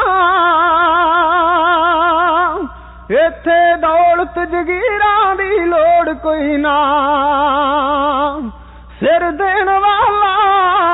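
No technical faults can be heard anywhere here.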